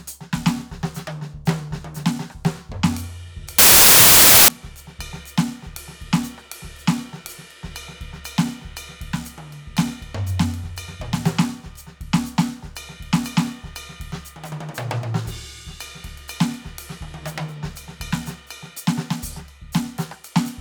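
From 3.58 to 4.48 s the music turns into loud noise with a slowed, lower trace buried inside: wrong sample width, packed 24-bit samples read as 16-bit, mixing bytes and playing at 0.667 speed. The waveform jumps toward full scale; the spectrogram fills with broadband noise.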